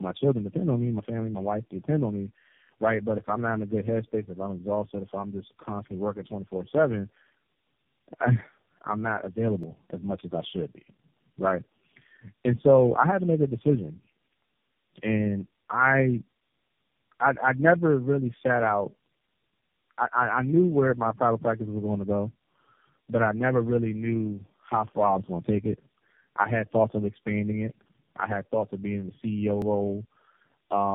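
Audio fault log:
throughout: tandem speech coding. The speech sounds rough, muffled and warbly, with nothing above 3.5 kHz. It was decoded and re-encoded at each link, which fits a chain of four low-rate speech codecs including AMR-NB. Each stage degraded the output of the one before, so the damage built up.
9.63 s and 29.62 s: audio missing between chunks. Two brief skips about 20 s apart. The first comes between "I'm not" and "as much as I". Each drops only a few milliseconds, and the two sides join with no silence. The likely cause is processing in 10 s chunks that loses a sliver at some boundaries.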